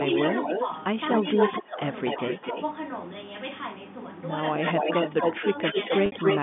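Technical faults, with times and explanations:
0.00–2.63 s and 4.66–6.39 s, echo leak: a distinct delayed copy of the far-end voice returns about 238 ms late and about 5 dB below the speech in the first stretch, then 263 ms late at about equal level in the second. The likely cause is a loudspeaker whose echo canceller let that pickup through. A single discrete repeat, not a diffuse reverberant tail, separates it from room reverberation.
1.34–2.56 s and 4.74–5.91 s, speech suppressed in double talk: while both sides overlap, the talker's level dips in pieces, by up to about 15 dB over roughly 0.4 s in the first span and about 5 dB over roughly 0.15 s in the second. The echo canceller likely turned everything down during the overlap. Unlike packet loss, these dips line up with the overlap and carry no held or buzzy tone.
6.06 s, packet loss with pitch repetition: a 60 ms gap, consistent with two lost packets, is bridged by repeating the last pitch period. 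This gives a brief held, buzzy tone before the speech resumes through a short cross-fade. The steady repetition of one period separates it from suppression dips, which only lower or thin the voice.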